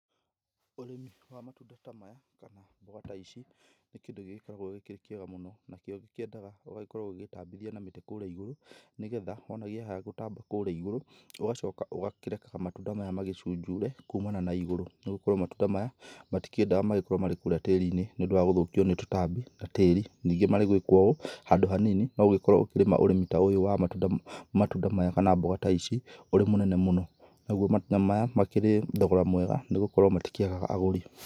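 Automatic gain rising occurs three times. After "gĩkĩrĩ kĩega mũno nakĩo", from 6.31 to 11.68 s, the level climbs by about 9 dB. The gain control judged the input too quiet and pushed its gain up slowly. Speech and background swell together. A second rise runs from 12.84 to 15.97 s, about 6 dB. A third, about 5 dB, runs from 16.55 to 19.42 s, ending just before "na tĩri".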